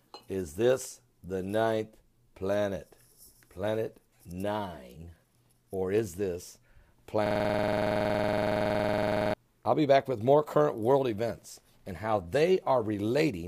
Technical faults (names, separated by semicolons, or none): system hang loop